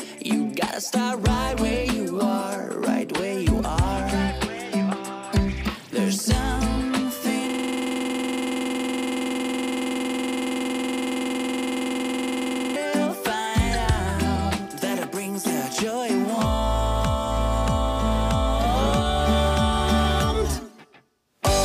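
From 7.49 s to 12.76 s, a system hang loop occurs: the system froze while the sound hardware kept replaying one 46.44 ms stretch of its ring buffer, which fits a 2048-sample buffer. That fragment repeats 113 times, producing a rapid stutter at 21.5 Hz.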